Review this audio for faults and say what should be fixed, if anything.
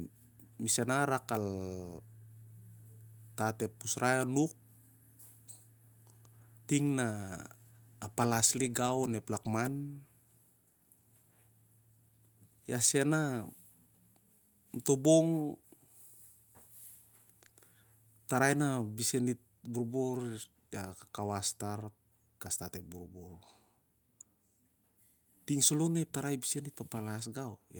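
No faults turn up anywhere in the recording. Nothing needs to be fixed.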